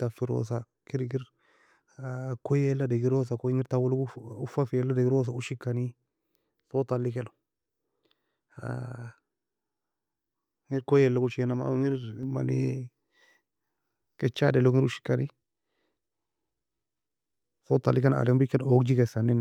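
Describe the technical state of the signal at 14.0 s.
At 14.0 s, a sudden gain jump persists from 12.23 s: speech and noise sit about 4 dB louder, an abrupt waveform step, likely an unramped gain change.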